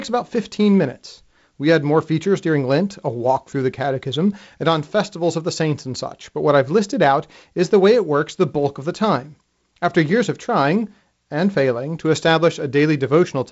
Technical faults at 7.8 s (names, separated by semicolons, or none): none